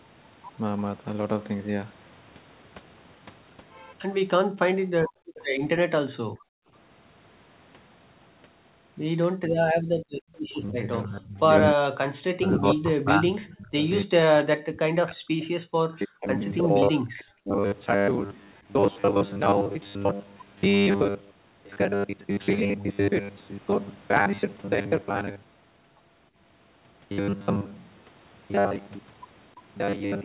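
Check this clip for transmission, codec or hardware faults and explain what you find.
The clip shows echo-canceller trouble of three kinds. Its narrow band, with nothing above 4 kHz, fits a narrowband call codec and is not a fault.

Background gated by the echo canceller, at 5.04–5.36 s, 6.23–6.71 s and 9.38–10.33 s. While far-end audio played through the loudspeaker, the canceller clamped the microphone hard to keep it from picking up that playback. The room tone falls away, by about 37 dB in the first and third spans and about 39 dB in the second. It then snaps back once the canceller releases.

Echo leak, at 5.36–5.45 s and 10.33–10.99 s. A faint delayed copy of the sound appears about 0.30 s behind the original, at 302 ms and then 308 ms. It sits roughly 25 to 30 dB below the main signal. The likely cause is that the far side's echo canceller failed to remove all of the loudspeaker sound reaching its microphone, so the residue travelled back down the line as a lagging ghost.

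Speech suppressed in double talk, from 10.7 to 17.6 s. The speech here repeatedly dips and breaks up. Around five seconds of this stretch are affected, with the deepest cuts near 40 dB. This likely happened because both ends were active together, and the canceller could not tell the local talker from the incoming echo. It turned everything down, chopping the near-end speech into pieces and dulling it while the other side was active.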